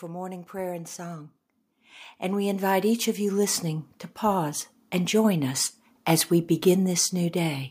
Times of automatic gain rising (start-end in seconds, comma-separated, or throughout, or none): 0.05-3.94